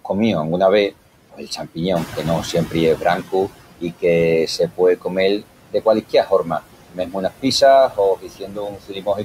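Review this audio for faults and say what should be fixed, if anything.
Noise suppressor artifacts run through the whole clip. The suppressor pulls steady noise down by about 18 dB frame by frame, so the background drops between phrases and returns underneath them. Prevention: use gentler suppression depth and smoother per-band gain changes.

Speech cut by the noise suppressor occurs four times. From 1.32 to 2.18 s, just after "comíu anguna vés", quiet speech drops by up to about 14 dB, for roughly a third of a second in total. From 2.53 to 4.04 s it drops by up to about 17 dB, again for about a third of a second. From 4.47 to 6.61 s the drop reaches about 18 dB across roughly half a second, and from 6.94 s to the end it reaches about 18 dB across roughly a second. Parts of the speech are mistaken for noise and sound swallowed. Prevention: have the suppressor protect low-level speech with better voice detection and a gain floor.

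Noise suppressor catching up runs from 1.95 to 3.48 s. At about 2 s the room noise rises by about 10 dB, ending up roughly 12 dB below the speech. The noise estimate lags, so the louder noise comes through less reduced and only sinks by about 13 dB over 1.53 s. Prevention: let the noise estimate adapt faster to sudden rises.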